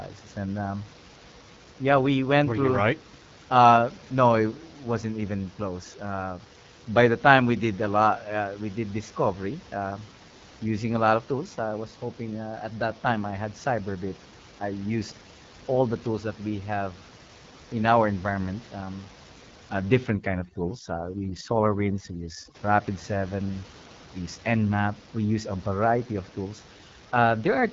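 An AMR wideband (HD Voice) codec shapes the whole clip. It rebuilds speech from a pulse-excited vocal tract model below 6.4 kHz and fills the band above that with shaped noise, and nothing at all is heard above 7.5 kHz. The coding damage is plainly audible: consonants and vowels carry a rough, raspy edge that fits one of the codec's lowest modes, around 8.85 kbit/s, where the pulse model is too coarse to hold fine detail.

Overdone noise removal takes hold from 20.09 to 22.55 s. For about 2.5 s a noise suppressor set far too aggressively pushes down any frequency band that sits near its noise estimate. The room noise, about 21 dB below the speech elsewhere, collapses toward silence with twinkling specks. Quieter parts of the voice are stripped away along with it.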